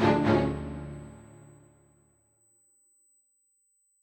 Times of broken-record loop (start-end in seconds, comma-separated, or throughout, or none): none